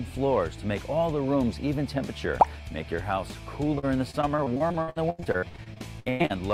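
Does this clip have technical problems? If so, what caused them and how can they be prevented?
Yes. From 3.75 s to 6.32 s there is repeated packet loss, giving a choppy, robotic sound. Across those 2.6 seconds the stream drops out 26 times, with the longest gap about 101 ms. Concealment patches each hole by extending the last sound, filling 865 ms in total, or 34% of the stretch, while 880 ms of audio is simply missing. Holes arrive too close together for the patching to hide them. Prevention: use a stable, low-congestion network path with an adequate jitter buffer and forward error correction.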